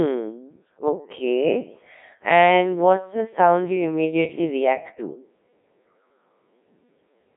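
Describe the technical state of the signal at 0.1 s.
At 0.1 s the signal already carries the Codec 2 vocoder damage that runs through the whole clip. The decoder rebuilds speech from sine waves driven by pitch, voicing and energy, so the speech sounds heavily robotic and buzzy, consistent with a rate near 1.3 kbit/s. On a spectrogram, energy sits between 150 Hz and 3.7 kHz with nothing above 3.8 kHz, and the harmonics look synthetic and evenly combed. The waveform shows regular resynthesised periods rather than natural speech shapes.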